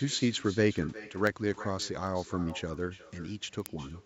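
A far-end loudspeaker feeds the call back into its own microphone, and with no echo canceller in the path, this echo with no canceller runs through the whole speech clip. Every phrase returns around 0.4 s after the original, at about 18 dB below the direct speech. The echo sits as a faint, thinner shadow trailing each syllable.

From 0.11 s to 4.03 s, a digital link is being read by a receiver whose clock is not locked to the sender's. The two clocks drift apart by a few hundred parts per million, and each time they slip, one sample is dropped or repeated. These word clock ticks come steadily, roughly every 70 ms, giving dozens of sharp clicks of uneven strength across the clip. The band tops out at 8 kHz, as expected from the call's microphone processing.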